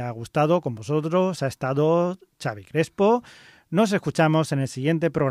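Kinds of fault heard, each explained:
No technical faults can be heard in the recording: the signal holds steady throughout, with no dropouts, clipping, noise bursts or other disturbances.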